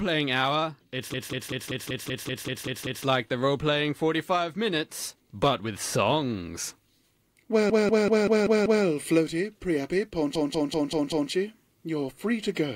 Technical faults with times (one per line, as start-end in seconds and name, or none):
1.13-3.05 repeated frames
7.69-8.85 repeated frames
10.35-11.31 repeated frames